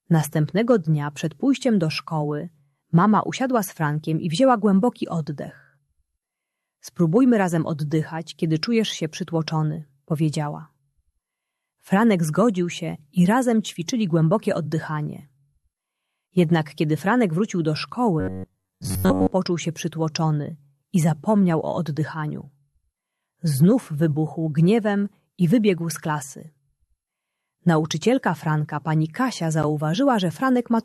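From 18.20 to 19.32 s the sound turns robotic, a rigid metallic buzz at about 93.8 Hz. This is likely repeated short buffers: most of the audio is replaced by loops of roughly 10.7 ms. A spectrogram shows evenly spaced horizontal harmonic lines, and the waveform shows closely repeating cycles.

At 29.63 s there is a gap at a join of encoded pieces, an 11 ms silence left by encoder delay and padding at the splice. The waveform dips sharply with smeared edges, seen on a spectrogram as a thin vertical blank stripe.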